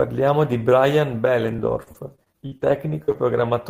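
From 1.45 to 3.52 s, the stream suffered repeated packet loss, with more than a dozen short dropouts, the longest 51 ms. Each hole was patched by extending the preceding sound, roughly 400 ms rebuilt in all, leaving the speech choppy with pieces missing.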